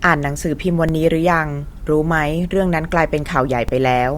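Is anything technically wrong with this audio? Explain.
Yes. The clip contains two DC steps, at 0.89 s and 3.69 s. At each point the waveform's zero line jumps abruptly to a new offset, as happens when a converter recalibrates or an input carrying an offset is switched in. The offset does not hold. It bleeds away through a high-pass response at about 20 Hz, so each jump registers as a brief low thump. The speech runs across both events unchanged.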